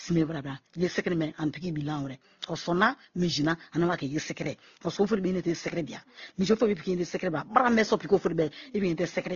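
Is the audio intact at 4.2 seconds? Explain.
No. At 4.2 seconds, as across the whole clip, the speech sounds dull, with nothing above 6.9 kHz and several layers of different codec artefacts heard together. This is likely transcoding between lossy codecs: each re-encode adds its own damage to the last, and the lowest cut-off in the chain remains.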